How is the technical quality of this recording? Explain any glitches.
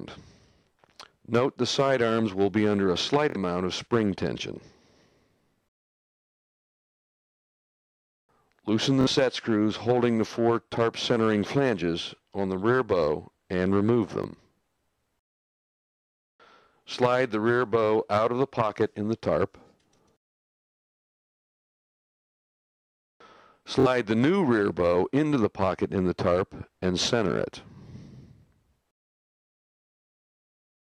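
Four brief glitches, all Bluetooth stutter, at 3.30–3.37, 9.01–9.07, 14.24–14.28 and 23.80–23.87 s. Lost or late packets made the receiver replay its last buffer, giving a short buzzy repeat that covers about 46 ms of missing audio (23 ms at 14.24 s). The sound then jumps ahead as if it had kept playing.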